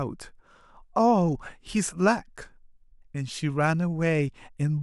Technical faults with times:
none

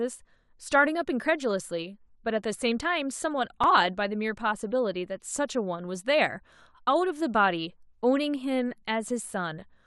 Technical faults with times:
3.63 repeated buffer

